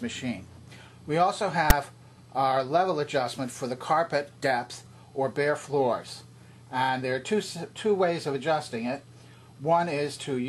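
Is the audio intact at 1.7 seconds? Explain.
No. At 1.70 s, file tags played as audio cut in. Text tag bytes are read as samples, giving a brief, hard-edged, loud rasp offset to one side.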